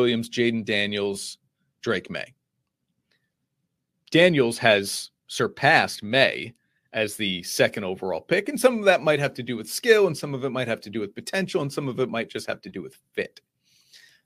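From 0.0 to 7.26 s, crude rate conversion by linear interpolation, consistent with 32 to 44.1 kHz, leaves a gritty, inharmonic fizz roughly 30 dB under the speech.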